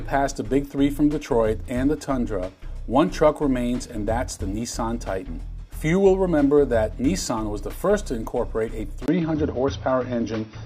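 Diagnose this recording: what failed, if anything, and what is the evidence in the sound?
At 9.06 s a brief silence of about 20 ms is followed by a narrower band, with nothing above 6 kHz, a level shift of a few decibels, and a new, low noise floor. This is likely an input switched to a poorer device at the driver level.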